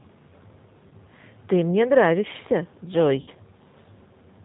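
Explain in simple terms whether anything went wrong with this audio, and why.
Throughout, the speech sounds slightly rough, thin and synthetic, with nothing bright above about 4 kHz. That is the G.729 codec, a low-rate phone codec that rebuilds the voice from a simple model of the throat and pitch plus a few pulses, rather than keeping the actual waveform.

At about 0.88 to 0.93 s, and again at 3.21 to 3.30 s, the speech briefly smears into a fading buzzy or hissy sound before returning a little weak. This is VoIP packet loss concealed by the speech codec. Pieces of the stream went missing, about 30 ms the first time and 60 ms the second, which fits one and then two lost packets. The decoder filled each gap by stretching the last sound it had and letting it fade.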